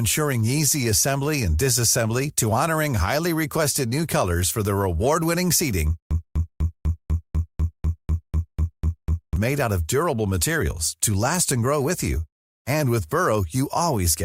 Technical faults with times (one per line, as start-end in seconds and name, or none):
6.00-9.36 stutter with silent gaps